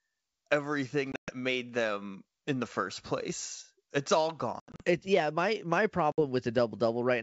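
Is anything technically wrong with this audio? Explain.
Yes. Packet loss on an ADPCM call cuts hard-edged silent holes at 1.12–1.32 s, just before "made them in the" (about 140 ms lost, longest gap 120 ms); 4.60–4.83 s (140 ms scattered over 200 ms); and 6.12–6.21 s, after "yeah my my" (60 ms). The decoder's adaptive predictor and step size lose track of the sender's, so each restart comes back slightly distorted, then settles within tens of milliseconds. The clean wideband G.722 coding around these gaps fits a 64 kbit/s link.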